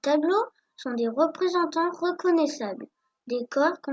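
No technical faults can be heard anywhere in this recording.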